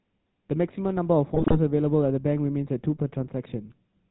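Throughout, the speech passes through the GSM full-rate codec, which models the vocal tract, drives it with sparse regular pulses, and cuts everything above 4 kHz, leaving a buzzy, gravelly roughness consistent with a 13 kbps stream. From 1.34 to 1.56 s, GSM bit errors corrupt the decoder's filter, pitch and gain values across a run of frames, so the speech breaks into squawks, pops and gargling.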